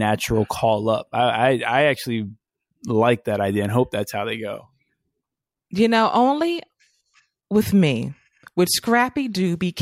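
Nothing goes wrong anywhere in this stretch of speech, so there's no fault to point to at any moment.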